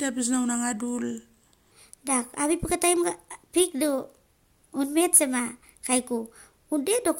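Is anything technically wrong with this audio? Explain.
Yes, there are two problems in this speech clip.

At 0.62 s there's a corrupt frame decoded: a single compressed frame with flipped bits got played anyway, so its energy lands at the wrong frequencies. You hear a brief chirp, squeak or blip peaking around -20 dBFS, over as quickly as that one frame.

From 1.72 s to the end, the section plays at the wrong speed, 1.25 times too fast. Pitch and tempo rise together, about four semitones higher, so the speaker sounds high and hurried. The likely cause is resampling or playback against the wrong clock.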